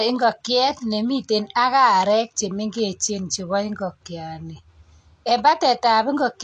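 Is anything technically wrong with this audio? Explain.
Yes, the whole clip shows AAC compression damage. Nothing in the speech reaches above 9.7 kHz, and sibilants sound dull and fizzy with a smeared, warbly edge. That's likely low-bitrate AAC-LC throwing away upper bands, and it fits something around 32 kbps.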